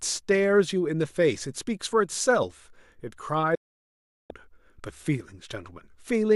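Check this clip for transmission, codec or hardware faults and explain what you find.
One transmission fault is present: a digital broadcast dropout from 3.55 s to 4.31 s. The receiver stopped getting decodable frames and muted. The speech fades to silence within about 8 ms, stays silent for roughly 0.74 s, then resumes further along, with that stretch lost. Unlike packet-loss concealment, nothing is patched or smeared over the gap.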